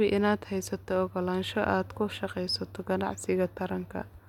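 No technical faults can be heard in this speech recording.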